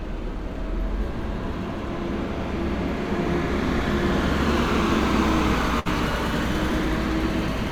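At 5.79 to 5.87 s, a burst of packet loss: the receiver extends the preceding sound for about 60 ms, fading it down, then resumes with roughly 60 ms absent.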